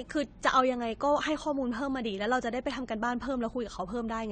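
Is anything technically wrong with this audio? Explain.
Yes. Throughout the speech nothing reaches above 9.1 kHz, and sibilants and held vowels warble and fizz. This is likely AAC compression at a low bitrate, fitting about 32 kbps: coarse quantisation smears detail, unlike a plain low-pass filter, which dulls without that swirl.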